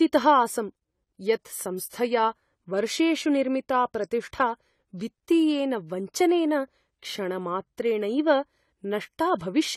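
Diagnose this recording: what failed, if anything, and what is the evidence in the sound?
The codec stage is where this speech went wrong, and the damage is plainly audible the whole way through. Nothing gets above 14.1 kHz, so the top end sounds dull, and there's a smeared, watery texture on sustained sounds and sibilants. That's the likely signature of AAC compression, AAC-LC at a low bitrate, roughly 32 kbps by the sound of it. The encoder lowers its cut-off and quantises coarsely, so detail gets starved.

The same codec leaves pre-echo right near the end, from 9.39 to 9.41 s, about 21 ms of short hiss arriving just before a sharp onset, which itself comes out softened. It's the transform block at work: the quantisation noise, sized for the loud attack late in the block, is spread across the whole block and fills the quiet moment ahead of it.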